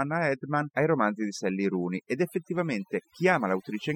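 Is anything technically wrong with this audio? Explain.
Yes. Overdone noise removal affects this speech clip from start to finish. A noise reduction process was pushed too hard. It cuts individual frequency bands deeply whenever their level sits close to its noise estimate. The softer parts of the voice fall into that range and get cut along with the noise. The background in the pauses drops, broken by small twinkling specks.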